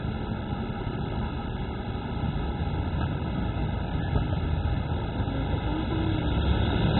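From start to finish, the encoding points to MP2 compression starved of bits, likely at a rate as low as 16 kbps. MPEG Layer II divides the spectrum into 32 sub-bands and shares out a bit budget among them; at this rate the upper bands cannot be paid for and are switched off entirely, leaving nothing above 4 kHz. The audio therefore sounds dull and boxed-in, and the few bands that survive are so coarsely quantised that the damage is heavy: a gurgling, grainy churn runs through the sound as bands flicker in and out.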